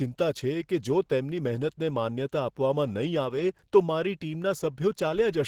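Speech runs through the whole clip with plainly audible Opus compression damage, likely from a low bitrate of about 16 kbps in the hybrid speech mode. The voice sounds hoarse and grainy rather than swirling or hollow as MP3 would, and content still reaches about 21.1 kHz.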